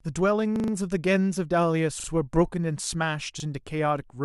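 Short stutters break up this speech recording at 0.56–0.72 s, 2.00–2.08 s and 3.40–3.44 s. The same 40 ms fragment is heard four extra times in the first, twice more in the second and once more in the last, each joined abruptly. This is a repeated buffer fault. Fresh audio failed to reach the output in time, so the last block was replayed, which fits a 40 ms buffer. Little or nothing seems missing afterwards.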